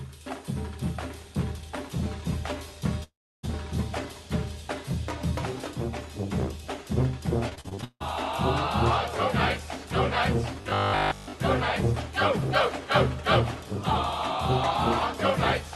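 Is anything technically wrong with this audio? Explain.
Yes, there are three separate faults.

From 3.03 to 3.45 s the sound drops out for about 0.4 s. The last sound is carried on briefly and then fades, leaving roughly 310 ms of silence. This is likely a long network dropout: nothing arrived, so the receiver extended what it had until it ran out.

From 7.49 to 8.02 s there is repeated packet loss, causing robotic sound. Packets went missing eight times, the longest gap being 160 ms. Each hole was patched by extending the preceding sound, so about 55% of this span is filler, and the result is choppy and broken up.

From 10.61 to 11.33 s the sound turns into a rigid buzz at 50 Hz that follows the original only loosely, with most of the stretch made of repeats. The likely cause is robotic sound from repeated short buffers: fresh audio arrived too seldom, and a 20 ms chunk was looped in its place.

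All of this passed through an Opus call path whose band stops at 12 kHz.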